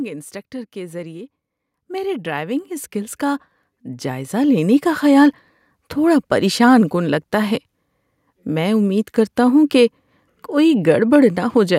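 Automatic gain rising from 0.73 to 5.31 s: the gain control judged the input too quiet and ramped up about 15 dB, swelling speech and background together.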